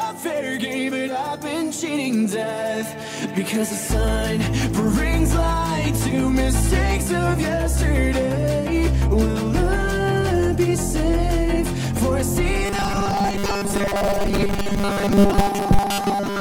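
From 12.66 s to the end at 16.41 s it turns to robotic sound, a metallic 200 Hz buzz, likely from repeated short buffers looping about 5 ms chunks over most of it.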